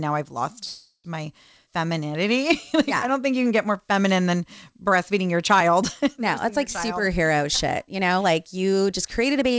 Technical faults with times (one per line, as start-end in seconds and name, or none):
0.65-1.07 call audio freeze
6.93-7.42 jitter buffer speed-up
7.84-9.51 jitter buffer speed-up